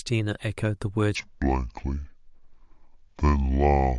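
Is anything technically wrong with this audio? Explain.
Yes. From 1.15 s to the end of the clip, the speech plays as a section at the wrong speed, running at 0.62 times its recorded rate. Because speed and pitch are locked together here, the slowdown also drops the pitch by about seven semitones, so the speech turns abruptly deep, drawn out and sluggish. This is likely a playback or editing stage applying the wrong clock rate to that portion of the audio.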